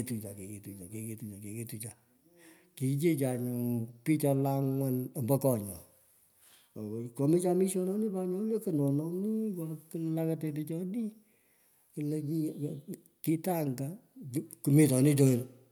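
Nothing stood out as a technical problem anywhere in the speech on listening.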